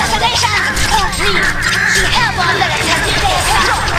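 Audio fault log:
1.83 s, overlapping chunks: a 13 ms sliver plays twice where one chunk starts before the previous one finishes, so you hear a quick click-like stutter.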